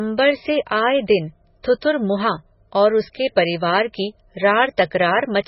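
Throughout the recording, the speech has a hard ceiling, with nothing above 5.6 kHz, and a heavy watery, swirling texture. The likely cause is MP3 compression at a very low bitrate, in the region of 16 kbps. Starved of bits, the encoder cuts the treble at a fixed point and drops weaker frequency components, which then flicker in and out between frames. That produces the warbling, metallic quality and softens consonant attacks and s sounds.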